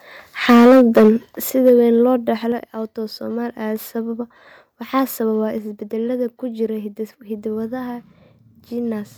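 From 0.49 to 1.09 s there is microphone overload. The input level was likely set too high, so the loudest speech peaks ran about 7 dB past the converter's ceiling and lost their tops, roughly a fifth of the samples in that stretch. The result is a harsh, crackling edge on the strongest syllables. Inside that stretch, at 0.51 s, comes a microphone volume step-down: the software likely cut the input gain by about 2 dB in one move, and speech and background drop together. At 1.5 s a larger cut of about 7 dB likely follows, making a sudden dip in level. Even so, the microphone overloads again from 1.66 to 1.7 s, this time only about 2 dB over and with a small share of samples flattened, giving a brief rasp on a peak. The gain likely steps down twice more, by about 5 dB at 2.52 s and about 3 dB at 5.58 s, and each time the voice and the room sound fall abruptly quieter.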